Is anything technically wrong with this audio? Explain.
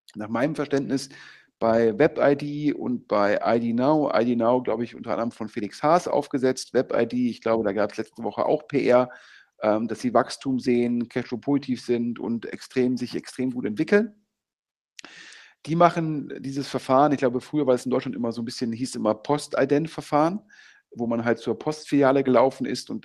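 No, nothing is technically wrong with this audio.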